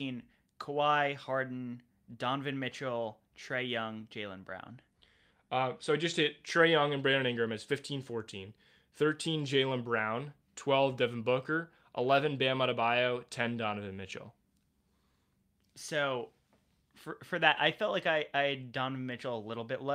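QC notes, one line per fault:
No faults were found in this speech clip on listening.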